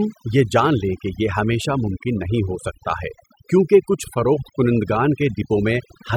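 From the first moment to the end, the recording shows overdone noise removal. A noise reduction stage was pushed too hard, so any frequency band sitting close to its idea of the noise gets pulled way down or switched off, and the softer parts of the speech get swept away with it. You hear it as a background that drops and breaks up into twinkly little specks.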